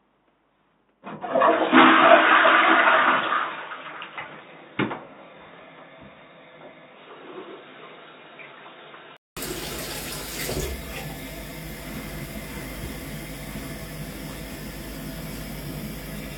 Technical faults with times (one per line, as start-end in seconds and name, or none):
0.00-9.37 input switched to a poorer device